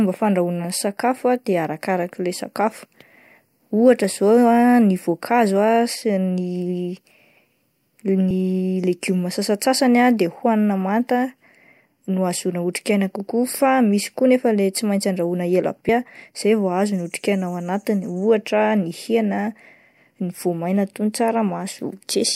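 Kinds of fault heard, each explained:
Compressed frames skipped: whole coded frames go missing, so the speech jumps ahead by a few frames at 8.30 and 15.89 s.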